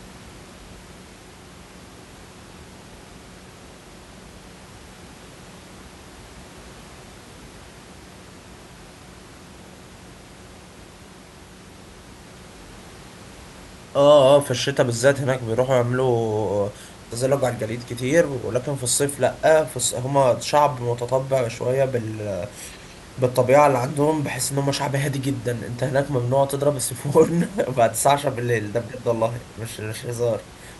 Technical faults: none

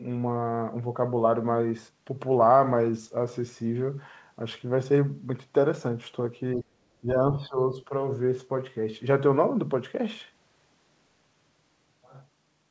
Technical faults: speech suppressed in double talk

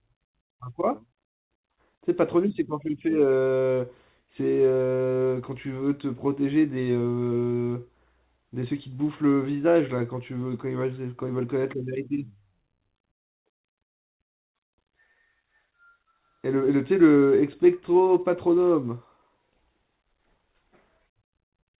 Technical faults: none

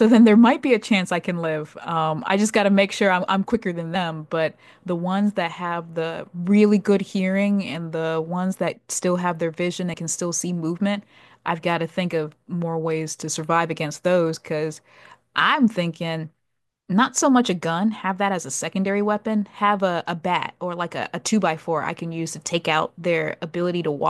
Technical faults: compressed frames skipped

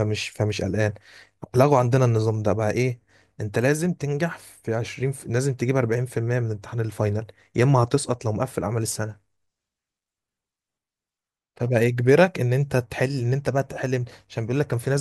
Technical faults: none

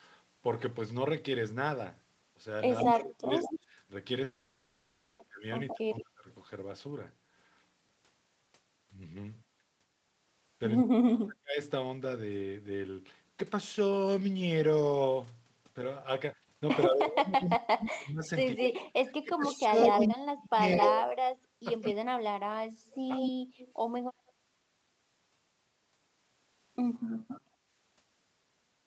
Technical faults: sample clock jitter; echo leak; speech suppressed in double talk; long network dropout

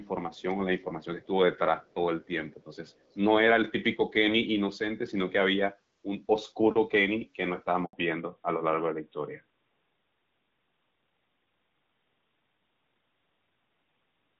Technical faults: echo leak; handover gap; fallback to narrowband

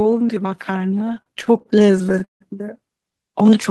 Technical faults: repeated stalls (stutter)

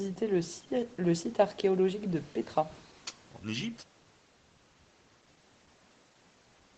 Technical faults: none

